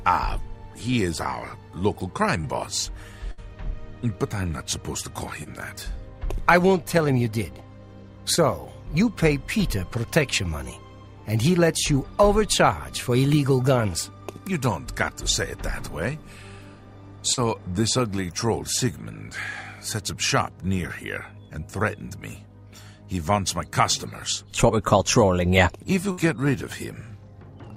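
A steady mains hum at 50 Hz runs through the whole clip. It sits roughly 25 dB below the audio. A ground loop or a nearby transformer is coupling the power line into the signal path. Short concealed packet loss occurs at 2.41 to 2.45 s, 5.43 to 5.48 s, 8.36 to 8.40 s and 17.34 to 17.39 s. Each time, about 20 ms of audio failed to arrive, or 40 ms at 17.34 s. The decoder patched the gap by extending the preceding sound. This leaves a brief smear or wobble. Bursts of packet loss hit at 3.31 to 3.39 s and 26.11 to 26.19 s. Each time, about 60 ms is gone. The receiver stretched the last sound and faded it, giving a held buzz or dying hiss. Playback then jumps ahead, with that stretch missing.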